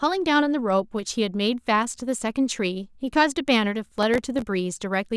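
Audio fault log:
3.84–4.42 s processor overload crackle: a dozen or more very short buffers miss their deadlines and drop to silence, leaving hard-edged waveform gaps and vertical broadband spectrogram streaks heard as gritty tearing.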